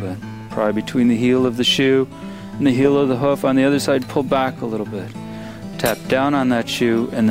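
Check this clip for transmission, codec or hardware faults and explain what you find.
Nothing in the clip stood out on listening as a transmission, codec or hardware problem.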